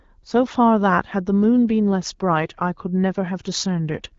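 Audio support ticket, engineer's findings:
No faults found; the speech arrives over the AMR wideband (HD Voice) path at 12.65 kbit/s with light coding effects and nothing above about 7.2 kHz, consistent with the normal band limit of that codec.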